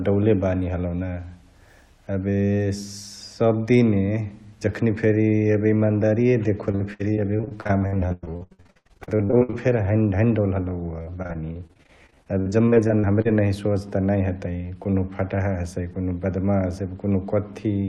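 Repeated packet loss (robotic sound) runs from 6.71 to 9.54 s, after "जखनी फेरी एबे इमन्दारिय", and again from 11.02 to 13.27 s. Lost packets are patched by stretching the preceding sound. The speech turns choppy and robotic.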